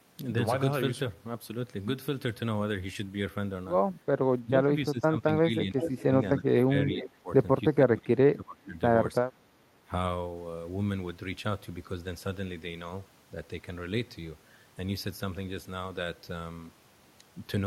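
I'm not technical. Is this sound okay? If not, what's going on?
No. Speech suppressed in double talk happens from 4.42 to 6.14 s, 6.4 to 7.29 s, 7.69 to 8.76 s, and briefly at 9.2 to 9.25 s. The voice suddenly drops much quieter or partly vanishes, sometimes for about a second. The likely cause is that both people on the call spoke at once, and the call's echo-removal system couldn't tell this voice apart from the other side's sound coming out of a loudspeaker, so it turned everything down.

An echo leak appears at 5.76 to 6.03 s and 6.91 to 7.03 s. A fainter copy of the voice comes back about 0.38 s late, like a short, ghostly repeat. The likely cause is that someone listened on a loudspeaker, their microphone picked that sound back up, and their echo-removal system didn't fully clean it out before sending it back.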